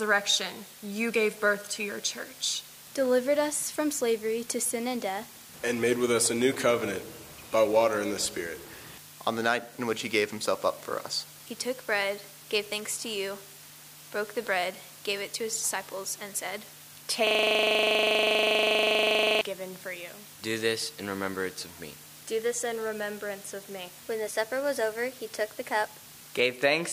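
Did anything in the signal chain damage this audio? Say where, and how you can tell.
Yes. From 17.27 s to 19.41 s the audio turns into a harsh, rhythmic buzz-stutter: one 40 ms fragment repeats exactly, some fifty times, at a 25 Hz loop rate. This is a system hang loop at the driver or buffer stage. The host or driver stopped supplying new samples, and the audio hardware kept replaying the same stale ring buffer, which fits a buffer about 40 ms long.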